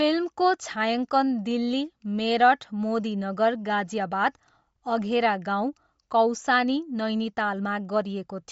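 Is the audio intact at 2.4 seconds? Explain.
No. At 2.4 seconds, as throughout the clip, the speech carries what sounds like Bluetooth LC3 compression, likely from an LE Audio link running at a low rate, which fits around 32 kbps with 10 ms frames. Short of bits, the codec discards much of the upper spectrum and fills the gaps with shaped noise. The result is plainly audible: nothing survives above 7.7 kHz, and the voice has a breathy, grainy edge.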